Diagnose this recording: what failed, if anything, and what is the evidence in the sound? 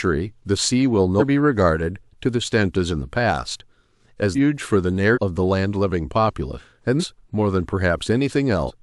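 The failure is at the codec or storage stage: compressed frames were skipped. The speech jumps forward at 1.19–1.23, 2.44–2.46, 4.34–4.37, 5.13–5.18, 6.57–6.60, 6.99–7.04 and 8.66–8.71 s, each jump losing between about a fifth of a second and most of a second of speech. Unlike a buffer dropout, there is no silent gap. The lost spans fit whole multiples of a 46.4 ms frame.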